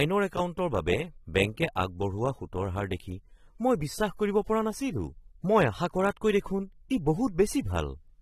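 Throughout the speech there is plainly audible AAC compression, likely from low-bitrate AAC-LC coding. Nothing sounds above 13.8 kHz. The coder keeps too little spectral detail, so the sound is dull and smeared. The damage fits roughly 32 kbps.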